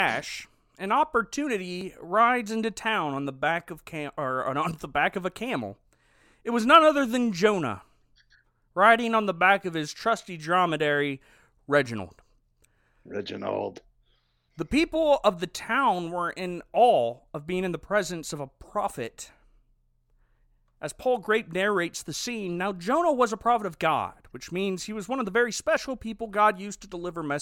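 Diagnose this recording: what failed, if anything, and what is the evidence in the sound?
What failed is the stream assembly, with an overlap between stream segments. You get three tiny clicks or skips: at 1.81 s, just before "rides into town on", at 13.78 s, and at 25.77 s, right after "one of the very". Each is a few milliseconds of lost sound, roughly 6, 12 and 15 ms, where the waveform jumps. Two segments claimed overlapping time stamps, so the player trimmed real audio. The events are 12 s apart, which fits boundaries between 6-second segments.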